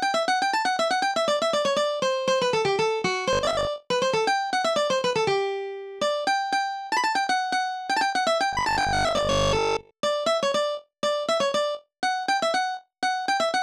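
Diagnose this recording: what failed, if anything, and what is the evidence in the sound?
Likely buffer starvation: 20 ms blocks repeat instead of new audio, causing robotic sound from repeated short buffers, a rigid 50 Hz buzz at 3.33–3.69 s and 8.53–9.93 s.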